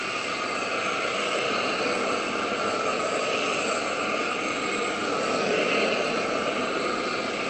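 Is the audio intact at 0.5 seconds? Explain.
Yes, the sound is intact at 0.5 s, with nothing there beyond the ordinary coding of the call path, whose band limit of about 8 kHz takes off the highest frequencies.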